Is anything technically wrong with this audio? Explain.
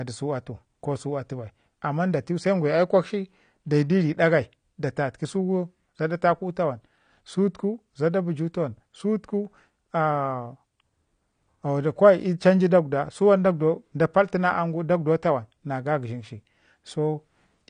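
Yes. Throughout, the speech sounds dull and smeared, with nothing above 9.8 kHz and fizzy sibilants. This is likely AAC compression, and the lowered cut-off fits a bitrate around 32 kbps.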